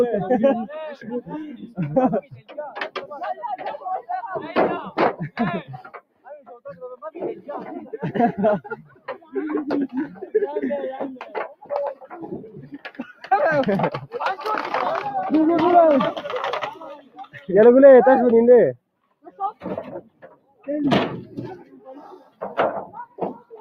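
A speech-tuned noise suppressor applied to music or sounds is pumping the whole clip by roughly 15 dB. Attacks pass but sustained parts sink, unlike a compressor, which ducks after loud hits. The suppressor cut sound by up to about 18 dB at 0.95–2.58 s, 5.29–7.09 s, 8.84–9.34 s, 11.21–13.31 s, 16.74–17.49 s, 18.77–20.68 s and from 21.57 s to the end, fading held tones and tails rather than dropping out abruptly.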